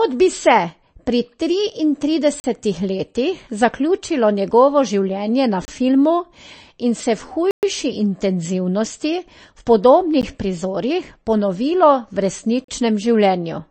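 From the start the speech sounds watery and swirly, with nothing above 8.3 kHz, likely MP3 compression at a low bitrate, roughly 33 kbps. Then come blocks of digital silence, hard dropouts to silence, at 2.40 s (40 ms), 5.65 s (29 ms), 7.51 s (a 120 ms hole), 10.21 s (a tick) and 12.64 s (40 ms), as if the buffer wasn't filled in time.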